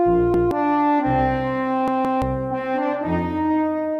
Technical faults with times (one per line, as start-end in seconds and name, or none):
0.34-0.51 repeated buffer
1.88-2.22 repeated buffer